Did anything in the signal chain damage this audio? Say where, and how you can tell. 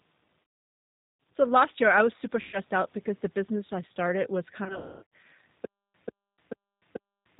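Yes. G.729 codec damage at the codec stage runs throughout: the 8 kbit/s pulse-based speech model leaves nothing above 4 kHz and makes the voice rough and synthetic.

VoIP packet loss concealed by the speech codec at 0.42–1.2 s, 2.41–2.59 s (after "year I was super", before "out because the business") and 4.64–5.07 s (after "business I started was"). This is a network fault: the decoder stretched the last frame into fading buzz.

Stutter with silent gaps from 5.65 s to the end: a 145 ms burst repeats every 437 ms with about 290 ms of digital silence between, likely a stalled playback buffer replaying its last fragment.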